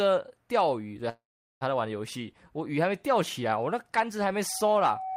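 At 1.09 s the speech halts for about 0.52 s in a call audio freeze, likely from delayed packets draining the jitter buffer. A brief fading buzz gives way to roughly 0.41 s of silence, then the speech resumes without loss, about 0.52 s later. From 4.49 s to the end, a loudspeaker feedback squeal grows over about a second into a 756 Hz tone, some 5 dB above the speech.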